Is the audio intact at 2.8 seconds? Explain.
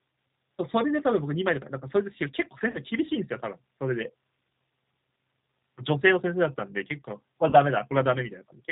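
No. VoIP packet loss concealed by the speech codec affects 2.71 to 2.78 s. About 30 ms of speech went missing, which fits a single lost packet, and the decoder bridged the gap by extending its last pitch and filter settings with steadily falling gain, so the sound smears into a brief buzzy tone or coloured noise that fades. Because each frame builds on the one before it, the speech is still recovering and weak or distorted at 2.8 s.

The G.729 codec also runs through the whole clip, and its sound fits G.729A at 8 kbit/s. It rebuilds the speech from a vocal tract filter, a pitch predictor and a few pulses in each 10 ms frame, so nothing above 4 kHz gets through and the speech has a plainly rough, synthetic quality at 2.8 s as well.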